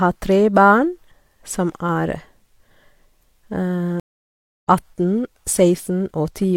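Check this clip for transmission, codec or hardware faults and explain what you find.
One transmission fault is present. Stream reconnect, 4.00 to 4.67 s: after about 630 ms of silence a fresh decoder resumes the speech roughly 0.7 s further on, skipping content rather than merely dropping out.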